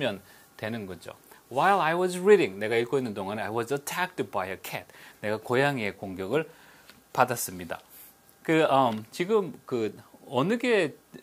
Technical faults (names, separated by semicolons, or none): none